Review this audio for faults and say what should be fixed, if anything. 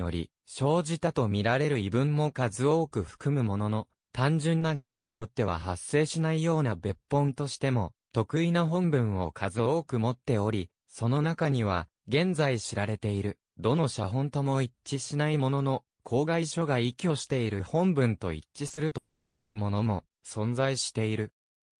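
A brief smear at 4.59 to 4.63 s is a short concealed packet loss. About 20 ms of audio never arrived in time, so the receiver stretched the preceding sound across the hole and blended back. A larger jitter buffer or forward error correction would prevent it.

At 4.75 s the sound trails off into a fading buzz or hiss and then goes silent for about 370 ms before resuming at 5.23 s, with roughly 460 ms missing. The same happens from 18.97 to 19.57 s, with 580 ms missing and 280 ms of silence. Both are likely long network dropouts, where the concealment ran out and the lost audio was never played. A more stable network link would prevent them.

From 18.67 to 18.93 s the sound turns choppy, with pieces missing. This is repeated packet loss: four separate gaps, the longest 40 ms, with about 38% of that stretch patched by continuing the previous sound. Reducing packet loss on the link, or enabling redundancy, would prevent it.

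The high end stops around 12 kHz, which fits the Opus codec used on the call path.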